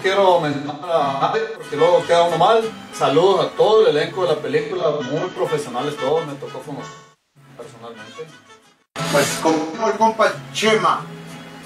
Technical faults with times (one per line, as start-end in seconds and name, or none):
0.52-1.70 AAC frame loss with concealment
4.62-5.41 AAC frame loss with concealment
6.84-7.50 AAC frame loss with concealment
9.52-9.98 AAC frame loss with concealment